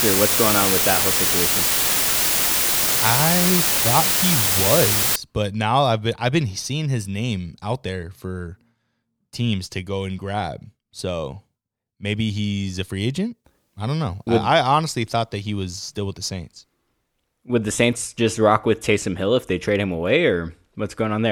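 From the start to 5.16 s, just before "but now I've been", the speech suffers low bit depth with dither. Only about 3 bits describe the signal, and dither added before rounding turns the quantisation error into steady white noise, roughly as loud as the speech itself. It sounds like a constant, even hiss with no distortion. On a spectrogram, a flat noise floor fills every frequency band; the waveform shows a thick, uniform band of noise.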